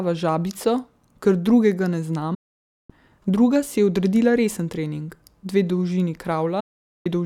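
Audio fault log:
2.34–2.90 s and 6.60–7.06 s, digital broadcast dropout: the receiver mutes after "drugega ne" for 0.56 s, then 0.45 s, with 8 ms fades. The waveform goes flat and the spectrogram shows blank columns.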